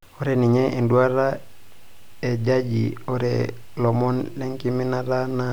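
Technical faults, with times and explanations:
No technical faults can be heard in this speech recording.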